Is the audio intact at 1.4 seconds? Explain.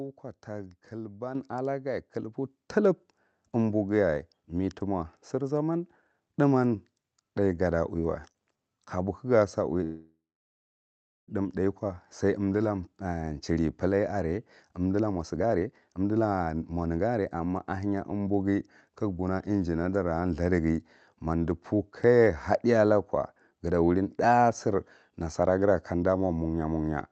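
No. At 1.35 s a microphone volume stepped up: the input gain was raised about 7 dB in one step, so speech and background jump louder together, a sudden step in the waveform envelope.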